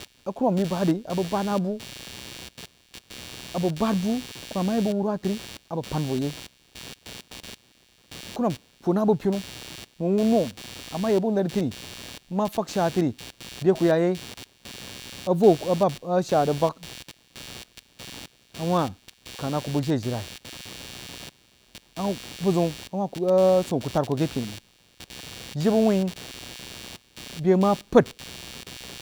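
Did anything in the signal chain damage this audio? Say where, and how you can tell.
Yes, computer activity noise runs through the whole speech recording: a buzzy chirping at around 150 pulses per second, roughly 20 dB below the signal, entering at the analogue wiring stage. Shifting processor or graphics load disturbs the ground the audio circuit shares. Unlike steady mains hum, it rises and falls with the machine's workload, not the speech.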